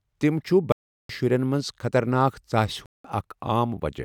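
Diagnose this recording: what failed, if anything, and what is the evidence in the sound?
The codec stage failed: corrupt frame muted. The speech drops to dead silence from 0.72 to 1.10 s and again from 2.86 to 3.04 s. Each gap starts abruptly and lasts a few compressed frames' worth of time. Damaged frames were rejected by the decoder and replaced with silence rather than concealed. Packet-loss concealment would fill the hole with smeared, repeated sound, and a buffer underrun would shift later timing. Here the holes are truly empty and the speech resumes on schedule.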